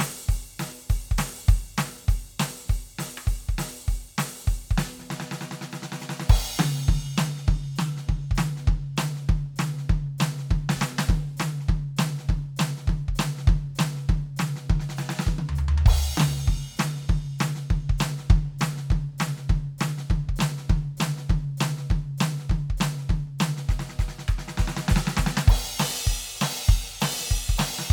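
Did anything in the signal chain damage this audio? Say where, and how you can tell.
No, nothing in the chain shows audible damage to this music at any stage.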